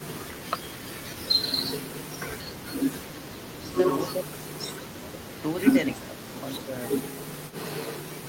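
Echo leak, 0 to 0.86 s: a faint copy of the speech follows it 232 ms late, around 20 dB below it, likely because a loudspeaker's echo slipped past the far end's echo canceller and was sent back.

Echo leak, 2.44 to 3.61 s: the same 232 ms repeat, at the same low level, is likely leaking through that canceller again.

Speech suppressed in double talk, 3.04 to 4.26 s: the voice dips in pieces by up to around 10 dB, for less than half a second in total. This is likely the canceller turning down both sides while they talk over each other.

Echo leak, 4.88 s to the end: the 232 ms echo comes back and stays, likely from the same incomplete cancellation.

Speech suppressed in double talk, 5.95 to 6.14 s: a deeper drop of around 15 dB, likely as the canceller again confuses the talker with the echo.

Speech suppressed in double talk, 7.24 to 7.33 s: a brief dip of around 10 dB, likely from the same overlap handling.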